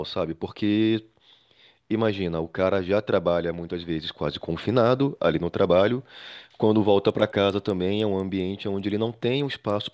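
From 7.0 s to the end, the speech picks up a steady tick at 10 Hz. That's the resampler restarting on every block. Each 100 ms block went from 44.1 kHz to 16 kHz in isolation, so every block edge got a small error. The ticks only come through while there's signal.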